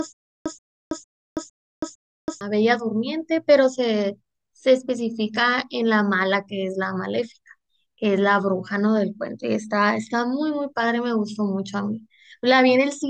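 A speech clip that opens with a stutter with silent gaps, already under way at 0.0 s and lasting until 2.41 s. A short 130 ms burst repeats five times at a steady 456 ms period, each followed by about 326 ms of digital silence, so the audio that belonged in that stretch never plays. The likely cause is a stalled player or stream replaying its last buffered fragment on each retry. On a waveform or spectrogram this shows as identical blocks separated by flat, completely empty gaps.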